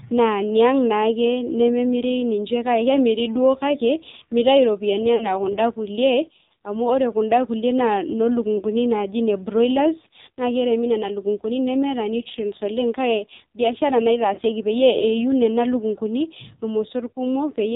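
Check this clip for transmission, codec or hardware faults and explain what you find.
Two faults are present: the whole clip of speech has been through the AMR narrowband mobile codec, and three short stretches show lost AMR speech frames.

The AMR narrowband mobile codec damage runs throughout and is heavy. The codec samples at 8 kHz and rebuilds speech from a vocal tract model excited by a few pulses per subframe, so nothing above 4 kHz survives. At this low rate the voice turns buzzy and synthetic. The buzz sets it apart from a plain low-pass or resampling fault, which dulls the sound without that artificial, pulse-driven roughness. The sound points to one of the low AMR-NB modes, around 5.9 kbps.

Lost AMR speech frames occur at 5.16 to 5.28 s, between "mitayu iropiyiani" and "kunda kulie", at 8.58 to 8.64 s, and at 14.34 to 14.40 s. Corrupted frames failed their checksum, so the decoder filled the gap by repeating the last good pitch and vocal tract settings at falling gain. 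The result is a brief smeared warble or dip rather than a hard gap. The first and last events fit 40 ms losses of two frames each, and the middle one fits a single frame. After each, the voice briefly returns weak or rough. A VoIP packet drop tends to cut to silence or a click instead.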